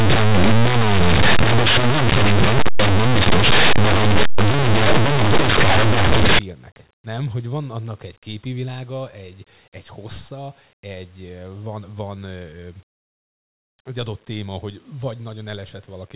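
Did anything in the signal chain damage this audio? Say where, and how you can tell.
Yes: sample-format conversion. From 0.0 to 6.39 s, linear 8-bit speech is read as mu-law, so values just on one side of zero expand to the largest outputs while those on the other side stay small, giving very loud, harsh distortion.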